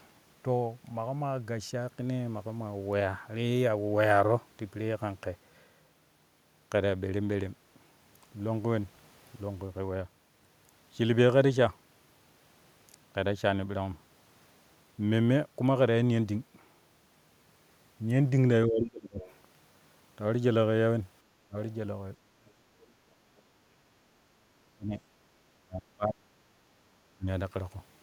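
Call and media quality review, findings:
Speech suppressed in double talk at 18.68–19.22 s, 21.45–22.74 s and 23.67–27.27 s. Talker's speech dips hard, roughly 30–35 dB at worst, in pieces. Likely echo canceller misreading near-end speech as loudspeaker echo during overlap and attenuating both.

Other side's voice leaking through at 19.2–19.33 s, roughly 20 dB under the talker, and 22.81–23.41 s, faint, well below the talker. Brief far-end scraps in the microphone signal. Likely residual loudspeaker echo not fully cancelled by the echo canceller.

Background gated by the echo canceller at 23.02–23.07 s. Room sound dips about 6 dB for 50 ms, then recovers. Echo canceller clamping microphone gain while loudspeaker playback was active, releasing immediately after.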